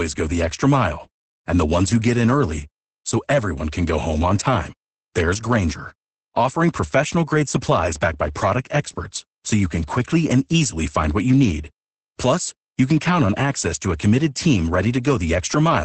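Opus voice compression runs through the whole clip, and the damage is heavy. The sound points to Opus in its SILK linear-prediction mode at a wideband setting, with nothing above 8.7 kHz, which fits a bitrate around 10 kbps. At that rate the excitation is coded very coarsely, so the speech comes out muffled and hoarse with a slightly robotic edge. The missing top octave takes the crispness off sibilants.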